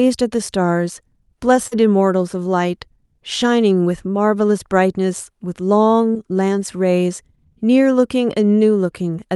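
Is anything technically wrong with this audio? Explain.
Yes, there is short concealed packet loss at two points, from about 1.67 to 1.73 s and at about 6.13 to 6.17 s. Roughly 40 ms and 20 ms of the stream arrived too late to decode, so the receiver extended the preceding sound to cover each gap and then blended back into the real audio. Each one comes across as a brief smear or wobble. The whole call carries a top cut-off near 12 kHz, consistent with a superwideband call codec.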